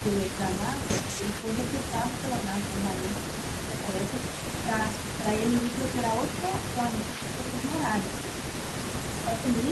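From start to finish, a loudspeaker-side echo canceller has likely let an echo leak through, so a faint delayed copy of the speech trails about 328 ms behind it, roughly 15 dB quieter, giving a doubled quality under everything.

Where both sides talk at once, the canceller likely treats the talker as echo and suppresses the speech in double talk. It dips briefly, by around 10 dB between 0.87 and 2.73 s and between 3.32 and 3.87 s, then more gently, near 5 dB, between 4.63 and 5.24 s and between 6.74 and 7.38 s.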